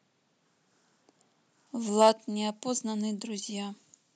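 At 1.67 s the speech turns abruptly thin, bright and sibilant, and stays that way to the end. This is pre-emphasis left on: a treble boost applied for recording or transmission was never followed by the matching de-emphasis cut. The tilt, consistent with a 75 µs FM-style curve, leaves 10 kHz about 14 dB hotter than 1 kHz, so sibilants hiss and the lower body of the voice sounds recessed.

From 2.01 to 2.09 s the loudest syllables pick up a harsh, crackling edge. The peaks run about 3 dB past the converter's limit and their tops are flattened, with roughly one sample in twenty stuck at the limit. This is microphone overload, likely from an input volume set too high for the converter.

At 2.13 s the voice and the background drop together in one sudden step of about 3 dB. This is a microphone volume step-down, likely the call software reacting to the clipped peaks a moment earlier by cutting the device's input gain in a single move. 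Because the change is instantaneous rather than a smooth fade, it is heard as a distinct level jump immediately after the distortion.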